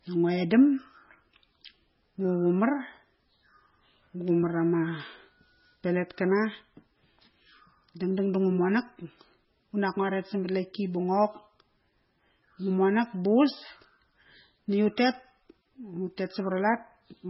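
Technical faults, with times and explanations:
Throughout, MP3 compression. Nothing sounds above 5.6 kHz, and the speech is watery and swirly, with smeared attacks. The likely cause is heavy MP3 encoding at a starved bitrate, which fits about 16 kbps. The encoder cut the treble and dropped weak frequency lines frame by frame.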